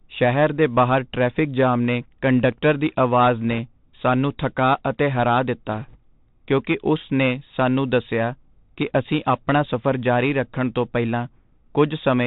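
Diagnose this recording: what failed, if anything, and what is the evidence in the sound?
The speech has passed through the Bluetooth CVSD headset codec, a codec-stage fault present for the whole clip. Nothing above 4 kHz survives, so the sound is narrowband and boxy, and the damage is plainly audible: a granular hiss sits under the speech, sibilants turn scratchy, and loud high-frequency moments distort where the one-bit delta modulator's adaptive step cannot keep up with the signal. The band limit fits a 64 kbps CVSD link.

Bit errors on a Bluetooth voice link appear as a short burst of rushing, crackly noise from 5.73 to 5.97 s, between "ਸਾਨੂੰ ਥੱਕਾ ਅਤੇ ਹਰਾ" and "ਕਿਉਂਕਿ ਉਸ ਨੇ ਸਾਨੂੰ". This is a radio-link fault. Flipped bits in the CVSD stream each nudge the decoded waveform by one step whose size grows with the speech level, and the decoder's errors fade out, so there are no sharp clicks. 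The texture instead suggests an error rate of around one percent for that quarter-second.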